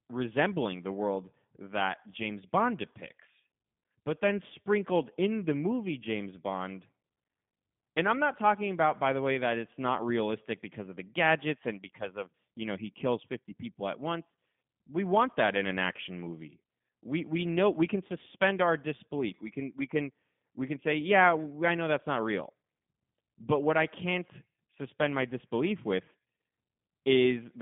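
From start to finish the speech sounds thin, boxed-in and faintly robotic, with a rough, buzzy edge on voiced sounds and no air or sparkle above about 3.7 kHz. That is G.729 codec damage, plainly audible here. At 8 kbit/s the coder discards the actual waveform and resynthesises each short frame from a vocal-tract filter, a pitch predictor and a handful of pulses, inside a telephone band of roughly 150 Hz to 3.6 kHz.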